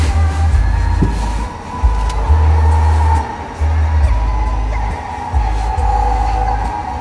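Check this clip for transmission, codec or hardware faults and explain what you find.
One fault is present: aliasing, running throughout the clip.

Aliasing, from start to finish: the audio was resampled to a lower rate without an anti-aliasing filter first, which fits a drop from 44.1 kHz to 22 kHz. Energy above the new limit of 11 kHz folds back below it, mirrored around 11 kHz, landing at pitches unrelated to the source. These false components sit roughly 25 dB under the wanted sound, enough to give high-frequency content a gritty, metallic edge, with the spectrum pressed hard against the 11 kHz ceiling.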